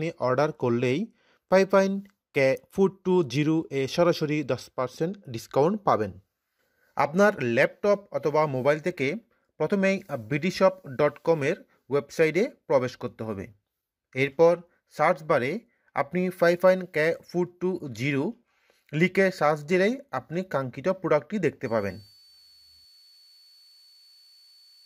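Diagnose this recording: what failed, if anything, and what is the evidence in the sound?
A switching supply whistle enters the analogue stage at 21.65 s and runs to the end of the clip at 24.86 s. It is a thin, high tone. Its pitch wanders slightly between 4.44 and 4.51 kHz. It sits roughly 30 dB below the programme. A nearby switch-mode power supply is running in an audible burst mode or beating with another supply. Its switching ripple couples into the analogue wiring as a drifting whistle.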